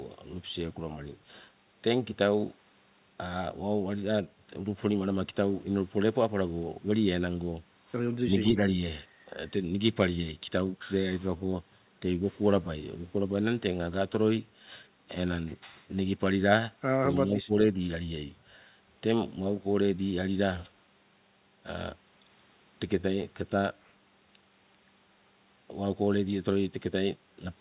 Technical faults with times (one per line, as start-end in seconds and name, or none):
8.25-8.66 speech suppressed in double talk
9.30-9.37 speech suppressed in double talk
17.06-17.75 speech suppressed in double talk